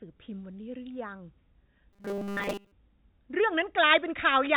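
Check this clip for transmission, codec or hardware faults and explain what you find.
One transmission fault, with the G.711 call path's 4 kHz band limit audible throughout. Robotic sound from repeated short buffers, 1.93 to 2.72 s: the speech becomes a rigid 200 Hz buzz, likely from starved audio being filled by looping a 5 ms fragment, replacing most of the real signal.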